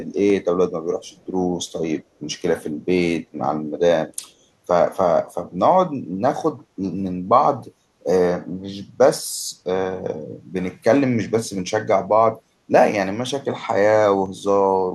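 Speech with a small jump forward at 0.3 s and again at 14.26 s, each losing around 20 ms, likely a dropped buffer (overrun) that the program failed to read in time. From 1.08 to 1.26 s a very faint copy of the voice trails about 292 ms behind, likely an echo leak that got past the far side's echo canceller.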